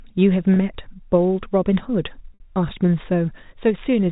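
Packet loss with pitch repetition at 0.54–0.56 s and 2.34–2.40 s: 20 ms and 60 ms gaps were filled by repeating the last pitch period, heard as a brief held buzz, the second fading toward silence.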